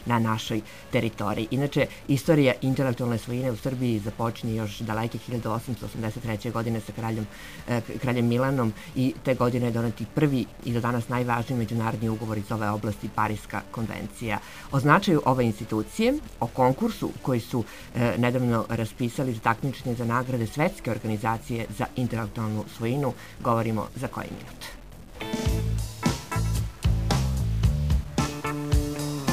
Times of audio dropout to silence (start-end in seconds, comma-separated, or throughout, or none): none